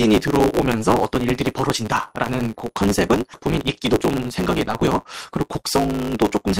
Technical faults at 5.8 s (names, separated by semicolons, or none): block size mismatch (truncated); jitter buffer speed-up